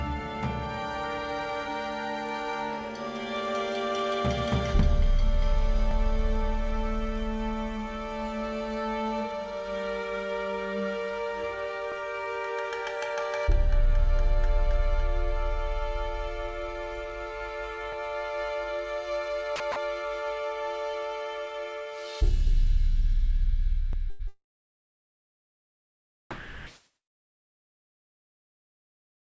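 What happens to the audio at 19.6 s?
At 19.56 to 19.60 s, the sound briefly gives way to a flat, steady hiss for about 40 ms before returning. This is likely sound dropped by the voice detector, with comfort noise filling the gap. A packet-loss dropout would instead leave silence or a smeared repeat.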